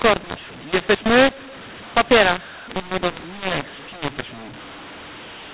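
Throughout the speech, mu-law and A-law are mixed up: A-law-coded samples are read as mu-law, scrambling every level. The voice turns harsh and gritty, and pauses fill with hiss. The waveform shows silences lifted off zero, and the spectrogram shows broadband noise below the 4 kHz telephone ceiling.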